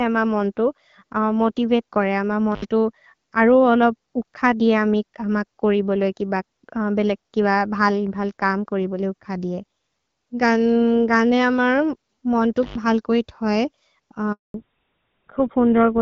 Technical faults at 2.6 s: intermittent contact

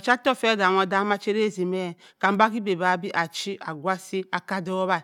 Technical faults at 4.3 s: none

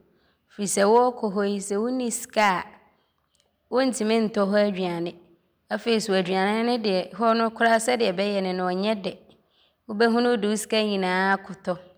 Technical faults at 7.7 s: hard clipping

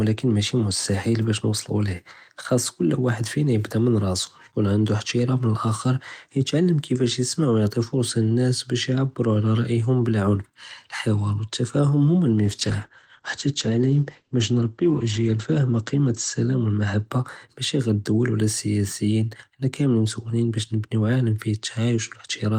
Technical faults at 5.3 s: none

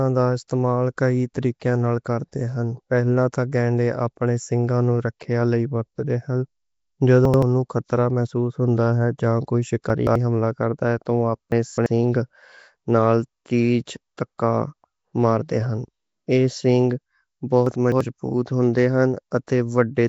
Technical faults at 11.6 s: Nellymoser compression; chunks out of order

